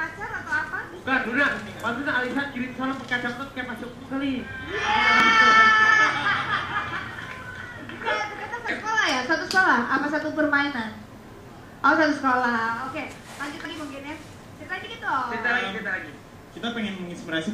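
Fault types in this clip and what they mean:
Dropped buffer (overrun): a likely cause for the abrupt forward jumps at 1.25, 5.20, 8.68 and 13.65 s, each skipping roughly 50 to 100 ms without any gap; the waveform shows a discontinuity where the edges meet, and the spectrogram a thin vertical broadband line there.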